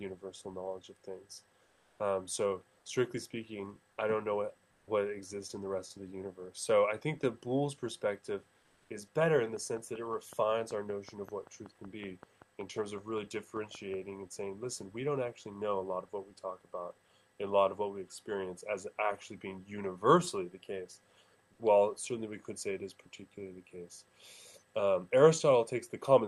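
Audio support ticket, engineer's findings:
Comfort noise in place of the background at 1.63–1.99 s, 4.71–4.87 s and 8.59–8.89 s: room tone turns flat and featureless in the pauses, up to about 2 dB quieter. Likely Opus DTX, with the receiver synthesising noise while the sender goes quiet.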